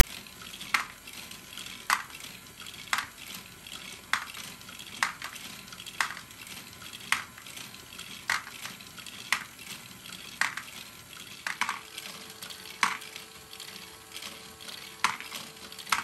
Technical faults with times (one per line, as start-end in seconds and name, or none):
0.00-0.03 file tags played as audio